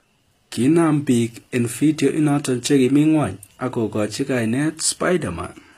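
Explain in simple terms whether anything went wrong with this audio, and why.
Yes, the s sounds come out gritty and lispy the whole way through, likely from HE-AAC compression faking the treble.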